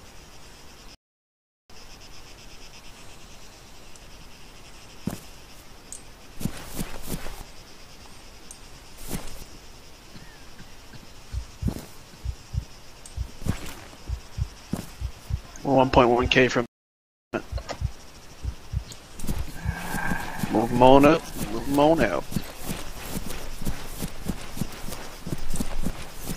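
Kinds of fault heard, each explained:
Playback stall: the sound goes silent at 0.95 s for 0.75 s and at 16.66 s for 0.67 s, likely because the player briefly ran out of data.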